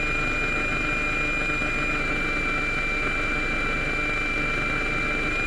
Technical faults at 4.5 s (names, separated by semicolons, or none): none